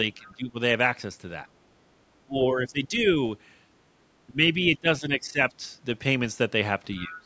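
Speech suppressed in double talk first appears from 0.15 to 0.56 s, and again at 2.26 to 3.07 s, 4.28 to 4.57 s, 4.77 to 5.39 s and 7.03 s to the end. The talker's level sinks by around 15 dB, nearer 10 dB in the 4.77 s stretch and about 20 dB at the close, so syllables thin out or break into pieces. The likely cause is an echo canceller that, with both parties talking at once, could not tell the near talker from loudspeaker echo and pulled both down.

The other side's voice leaking through is heard faintly from 0.22 to 0.34 s, roughly 30 dB under the talker, and more plainly from 6.96 to 7.23 s at around 20 dB down. It comes through as a second voice behind the main one. This is likely residual echo: the far party played over the device's loudspeaker and was picked up again by its microphone, with the canceller failing to remove all of it. The call's microphone processing leaves the band empty above 8 kHz, which is normal for this kind of audio.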